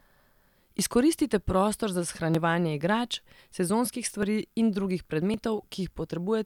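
Speech with five short jumps at 0.79 s (just before "prostor za"), 2.35 s, 3.39 s, 4.23 s (between "igrač sezonskih" and "in drugih") and 5.34 s (just after "in drugih"). Each is a small jump with no gap, as if around 20 ms of sound were cut out and the edges butted together. The likely cause is a dropped buffer (overrun), where the capture software failed to read a block in time and the hardware overwrote it.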